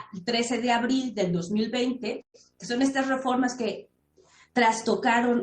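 Delayed packets likely emptied the jitter buffer, causing a call audio freeze at 2.21–2.36 s: a brief fading buzz, then silence, before the audio resumes 126 ms late.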